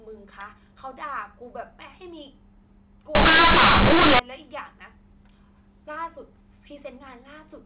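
From 3.15 to 4.19 s, companded audio is read as linear: A-law bytes played as plain 8-bit samples. The speech becomes loud, harsh buzz with noisy pauses.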